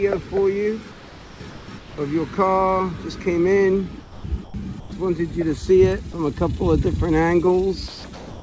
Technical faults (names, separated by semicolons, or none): comfort noise in place of the background; sound dropped by the voice detector